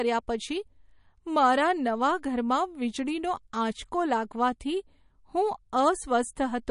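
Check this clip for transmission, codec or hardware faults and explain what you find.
One codec fault runs through the whole clip. Throughout, the audio has nothing above 10.6 kHz and a plainly audible watery, swirling quality; the likely cause is MP3 compression at a low bitrate, around 40 kbps. Short of bits, the encoder cuts the treble and drops weak frequency lines frame by frame. That flickering, not the cutoff, distinguishes it from plain low-pass filtering, which only dulls.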